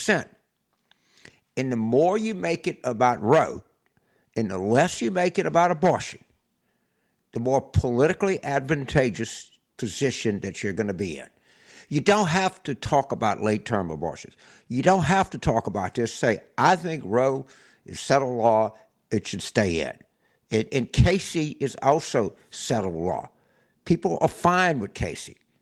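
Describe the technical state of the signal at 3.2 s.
A lost packet rebuilt from error correction sits at 3.13 to 3.19 s, just after "more you make it". About 40 ms, which fits two lost packets, was replayed from low-bitrate copies carried in following packets, so there is no gap, only a briefly rougher, noisier stretch.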